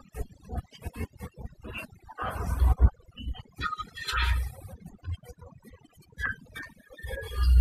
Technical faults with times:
0.00-7.60 overdone noise removal

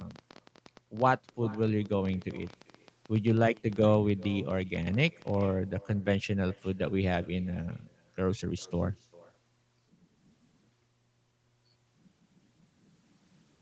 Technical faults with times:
0.00-13.61 echo with no canceller
0.01-5.42 train of clicks

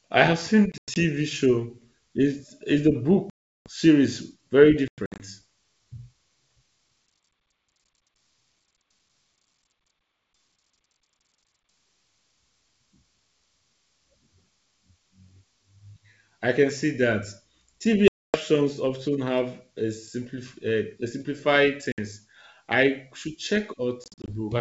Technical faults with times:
0.72-0.97 packet loss on an ADPCM call
3.30-3.68 packet loss on an ADPCM call
4.88-5.26 packet loss on an ADPCM call
18.08-18.37 packet loss on an ADPCM call
21.92-22.00 packet loss on an ADPCM call
24.04-24.32 packet loss on an ADPCM call

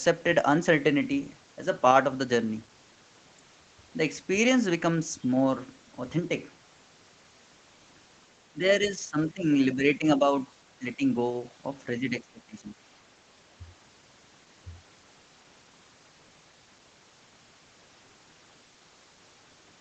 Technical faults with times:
8.80-10.24 speech suppressed in double talk
12.00-12.75 speech suppressed in double talk

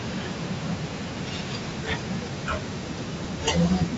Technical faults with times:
0.00-3.97 Bluetooth LC3 compression
1.70 lost LE Audio frames
3.24 lost LE Audio frames

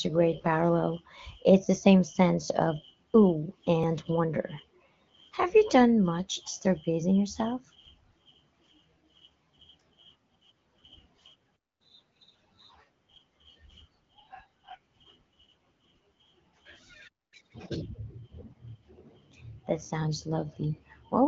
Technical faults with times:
3.83 audio missing between chunks
9.81 audio missing between chunks
11.56-11.81 playback stall
11.81-12.74 catch-up at higher speed
17.08-17.34 playback stall
17.34-17.82 catch-up at higher speed

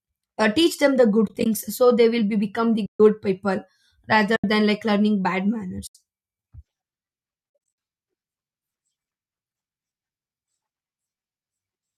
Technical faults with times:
1.26-1.46 AAC frame loss with muting
2.85-3.00 AAC frame loss with muting
4.36-4.44 AAC frame loss with muting
5.87-5.95 AAC frame loss with muting
7.50-7.78 AAC frame loss with muting

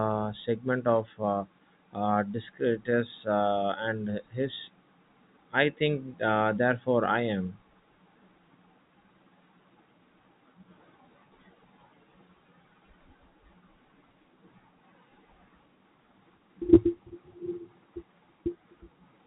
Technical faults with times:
none

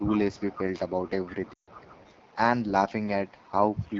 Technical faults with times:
0.00-3.99 AMR wideband (HD Voice) codec
0.00-0.45 speech suppressed in double talk
0.06-0.61 echo leak
1.26-2.12 echo leak
1.28-1.41 speech suppressed in double talk
1.53-1.70 lost AMR speech frames
3.93-3.99 echo leak

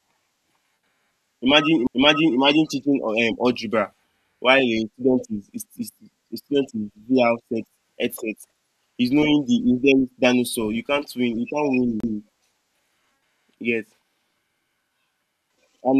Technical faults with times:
1.87 CD skip
12.00-12.03 CD skip

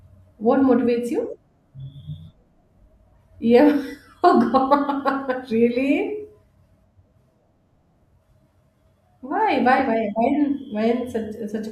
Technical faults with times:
none

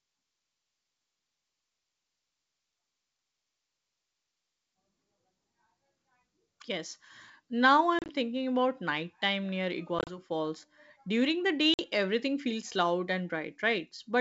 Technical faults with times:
7.99-8.10 packet loss on an ADPCM call
9.99-10.18 packet loss on an ADPCM call
11.74-11.80 packet loss on an ADPCM call

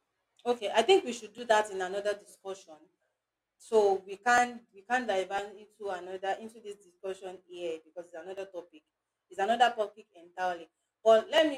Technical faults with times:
0.38-11.38 periodic USB or driver dropouts

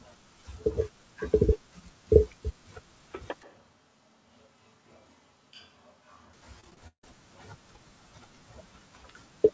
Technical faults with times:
3.43-6.33 switch to a distant microphone
6.60-7.04 repeated packet loss (robotic sound)

